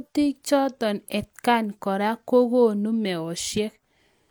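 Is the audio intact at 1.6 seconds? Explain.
Yes, the speech at 1.6 seconds is intact, with no dropout, click, distortion or other fault at that moment.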